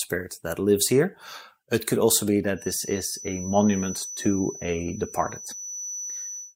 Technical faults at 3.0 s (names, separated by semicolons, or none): feedback whistle